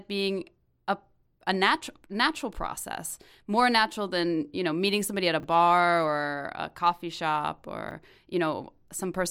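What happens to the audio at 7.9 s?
A brief jumbled blip interrupts the speech from 7.89 to 7.91 s. It is a case of chunks out of order: a 10 ms chunk arrived one chunk late and plays after its successor, so nothing is lost, but the swap leaves three hard joins.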